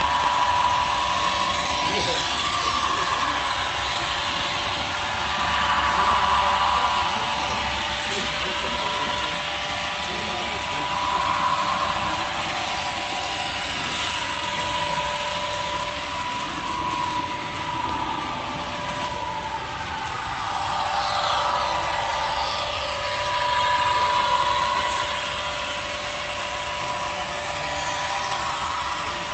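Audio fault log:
Nothing stood out on listening; the audio came across as expected for a call connection.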